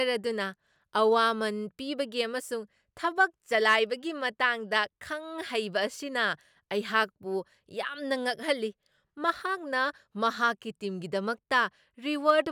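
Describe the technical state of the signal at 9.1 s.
At 9.1 s the speech signal is intact, with no audible technical fault at that moment.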